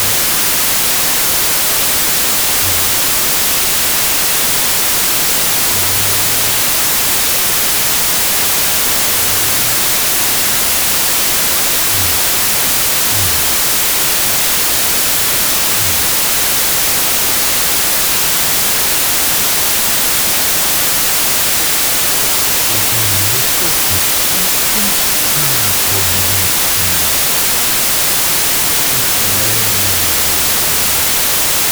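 Speech heard through a dense, loud hiss for the entire clip, playing at half speed and an octave low, which is the signature of a wrong sample width: 32-bit integer samples read as 16-bit. Each original sample splits into two values. The upper half carries the top bits of the real waveform, and the lower half is effectively random, so noise alternates with a halved, smeared version of the speech and doubles the sample count.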